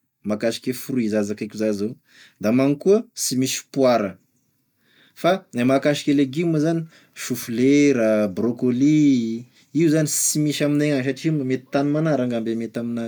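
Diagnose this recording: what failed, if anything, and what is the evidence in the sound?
Nothing failed here as far as I can hear: the speech comes through with no fault anywhere along the chain that the sound gives any evidence of.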